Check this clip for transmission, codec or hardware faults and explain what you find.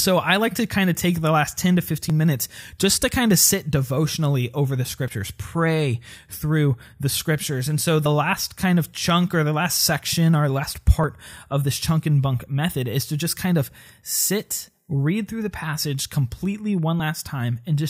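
The speech has one recurring fault, audio missing between chunks, at 2.10, 5.08, 8.06, 11.04 and 17.00 s. The likely cause is a recorder or processor working in blocks of about 3 s that drops a sliver, around 20 ms, at each handover, then splices the edges together without a gap. Each one is heard as a brief skip, just before "minutes just to kind", just before "last kind of chunk", and right after "through the passage completely".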